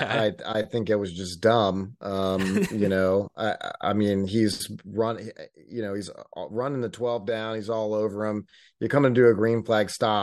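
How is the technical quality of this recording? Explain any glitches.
Listening through the recording, nothing stood out as a technical glitch or problem.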